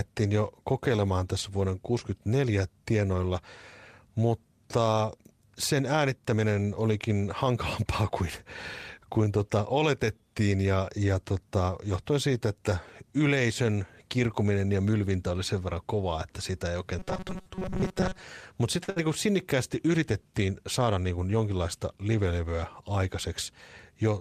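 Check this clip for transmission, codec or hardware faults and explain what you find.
There are four network-delivery faults in this speech clip, all clustered between about 17 and 21 seconds.

From 16.99 to 18.22 s, right after "kovaa että sitä ei", there's robotic sound from repeated short buffers. The voice turns into a stiff metallic buzz at 188 Hz, which fits the player looping a roughly 5 ms chunk while fresh audio arrives too rarely. Most of that stretch is repeats, which is likely the cause.

At 18.83 s comes a short stall from a late packet. A packet missed its slot, the jitter buffer ran dry, and the receiver stretched the last sound for 45 ms until it showed up. Nothing is lost, but there's a brief held moment with a slight buzz or dip, and about 45 ms of added delay.

Straight after, from 18.90 to 18.98 s, just before "niin kuin sinnikkäästi yritettiin", a burst of packet loss hits. 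About 60 ms of audio never arrived. The receiver bridged the gap by extending and fading the last sound, then jumped ahead, so a small chunk is simply gone.

From 20.86 to 21.18 s, between "niin kuin sinnikkäästi yritettiin" and "jonkinlaista livelevyä", there's a jitter buffer speed-up. The buffer had overfilled, so the receiver trimmed pitch-period slices, around 50 ms in total. That part plays at 113% speed with unchanged pitch and sounds a bit rushed.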